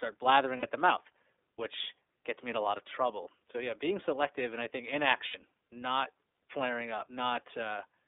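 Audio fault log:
throughout, iLBC codec: The speech passes only between about 300 Hz and 3.6 kHz and has a plainly rough, slightly synthetic grain. Each block is coded on its own, and the block timing fits a 30 ms frame, as in the 13.33 kbps mode. On a spectrogram, energy ends sharply at 3.6 kHz with an empty band above and a thin floor below 300 Hz. Harmonics look slightly smeared, and the waveform loses fine detail.
0.57–0.63 s and 5.28–5.35 s, lost iLBC frames: Two gaps of about 60 ms each, consistent with two lost 30 ms frames. Where speech is missing, the decoder repeats the last pitch cycle with added noise, giving a short held, buzzy vowel. The first gap comes just before "at the mouth which". The second falls between "selective and I think" and "not flaring". Because each frame decodes independently, the speech recovers at once. On a spectrogram, frozen, evenly spaced harmonics with a noise haze sit in place of changing formants. 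The waveform shows a repeated cycle pattern.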